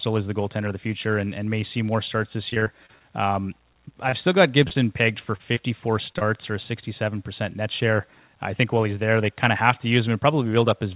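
Repeated packet loss (robotic sound) runs from 2.5 to 4.77 s and again from 5.37 to 6.23 s. About a dozen short holes in the first stretch and four in the second, none longer than 28 ms, were patched by stretching the preceding sound. This gives a choppy texture with fragments missing, concealing about 10% of each span.

Jitter buffer speed-up follows from 7.6 to 8.35 s. Excess buffered audio was trimmed by cutting out pitch-period-sized slices, around 50 ms in total. The speech plays at 106% speed with unchanged pitch and sounds hurried. Throughout, the narrowband call path leaves nothing above 4 kHz.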